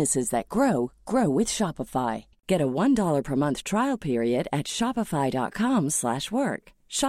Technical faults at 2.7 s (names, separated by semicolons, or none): none